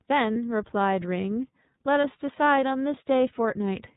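Throughout, the speech carries the iLBC codec's narrowband, slightly rough and synthetic character, with nothing above 4 kHz, which fits its 30 ms, 13.33 kbps mode rather than a plain low-pass filter. At 0.33–0.36 s and again at 2.01–2.05 s, lost iLBC frames leave a brief held, buzzy vowel where the decoder repeats the last pitch cycle; unlike a dropout's silence, the voice recovers immediately afterwards.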